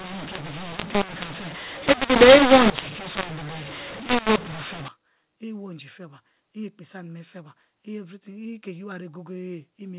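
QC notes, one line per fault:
0.0–4.88 s, mu-law and A-law mixed up: A-law telephone audio is being decoded as mu-law, so levels get scrambled, quiet samples jump well above silence and the speech turns harsh with noisy pauses, clearing up right before "i iwo iinji feba" once the 8 kHz A-law path decodes properly.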